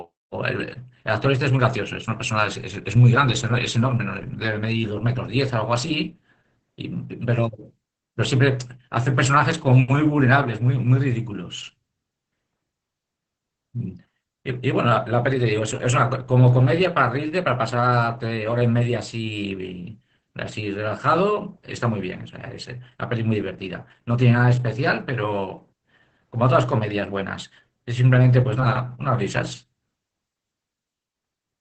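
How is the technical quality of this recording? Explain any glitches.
The recording is heavily degraded by low-rate Opus voice compression, audible for the whole clip. The speech is muffled, with nothing above about 8.7 kHz, and it has a hoarse, faintly robotic grain. The limit fits SILK's wideband mode. The coder models each 20 ms frame as a vocal-tract filter driven by a coarsely coded excitation, and at what sounds like about 10 kbps that excitation is too crude to carry natural breathiness. Unlike a simple low-pass filter, which only dulls the sound, the hoarse, buzzy texture shows the waveform itself is being rebuilt.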